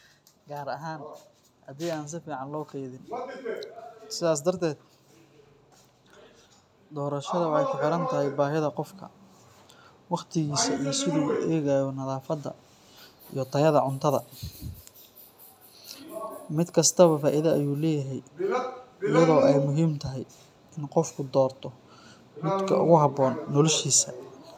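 Automatic gain rising appears twice: from 0.48 to 3.08 s, and again from 6.9 to 8.82 s. Each time the automatic gain control judged the incoming speech too quiet and slowly turned its gain up, by about 5 dB in the first stretch and about 4 dB in the second. Because the whole signal is amplified, the voice and the background noise swell together over roughly two to three seconds, a gradual creep in loudness.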